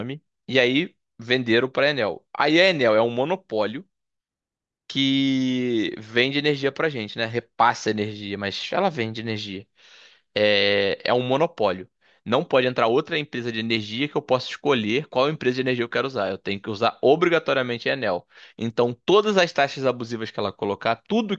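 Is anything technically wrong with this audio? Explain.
No, nothing technically wrong can be heard here.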